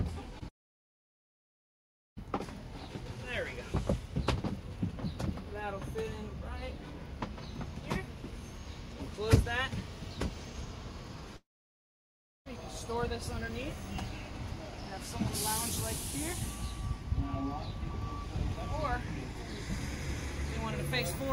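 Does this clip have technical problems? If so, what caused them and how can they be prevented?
Yes. Between 0.39 and 0.43 s, about 20 ms of audio packets failed to reach the decoder in time, a short concealed packet loss. The receiver extended the preceding sound across the gap and blended back, leaving a brief smear or wobble. A larger jitter buffer or forward error correction on the link would prevent this.

Twice, the audio simply stops arriving, most likely from a long network dropout. From 0.49 to 2.19 s and from 11.37 to 12.48 s, the receiver briefly carries the last sound forward before it fades, leaving about 1.65 s and about 1.03 s of silence. The audio then resumes with the missing stretch gone. A more stable connection, such as wired rather than wireless with no competing traffic, would prevent these gaps.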